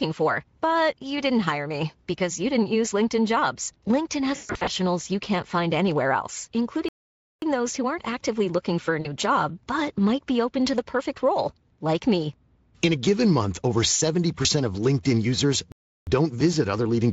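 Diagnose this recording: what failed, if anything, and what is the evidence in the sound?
The network stage failed, and the speech codec covered the gaps with VoIP packet loss concealment. The worst patch is 4.35 to 4.69 s, just before "you can't find anywhere". There, about 260 ms of audio is missing, scattered over 320 ms, with the longest gap near 140 ms. Shorter ones fall at 9.01 to 9.10 s, between "actively looking for a" and "job but might be", and at 14.43 to 14.47 s. The decoder repeats its last pitch and filter with falling gain, so the sound is stretched into a buzzy tone or coloured noise that fades. It stays weak briefly after real packets resume. The lightly compressed Speex layer beneath is otherwise working normally.

Playback itself also stalled twice. The first stall runs from 6.89 to 7.42 s, about 0.54 s. It falls between "can't find anywhere else" and "those who aren't actively". 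The second runs from 15.72 to 16.07 s, about 0.35 s. Each time the sound stops dead in mid-flow, and the output is silent. It then picks up again. Nothing is smeared or concealed, unlike the packet losses. The cause is likely the player's buffer running dry or its thread being blocked.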